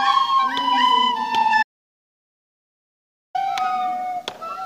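The input path was likely interrupted, an audio dropout to silence, so the recorder wrote silence from 1.63 to 3.35 s, leaving 1.72 s of dead silence without room tone.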